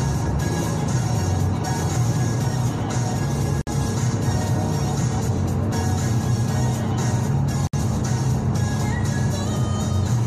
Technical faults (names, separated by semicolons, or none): gap at a join of encoded pieces